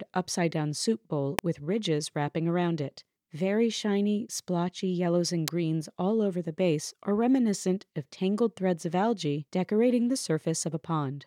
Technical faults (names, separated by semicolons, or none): electrical switching spike